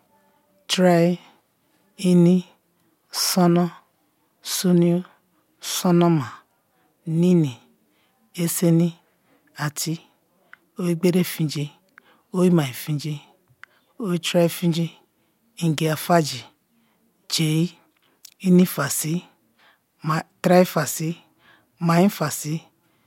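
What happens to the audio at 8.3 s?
At 8.3 s the speech carries on intact, with no dropout, click, distortion or other fault at that moment.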